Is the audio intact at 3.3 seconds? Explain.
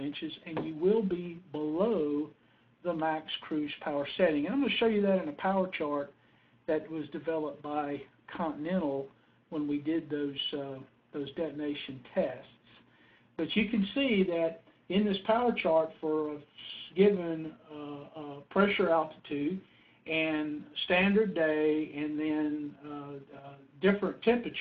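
Yes, the audio at 3.3 seconds is intact, with no dropout, click, distortion or other fault at that moment.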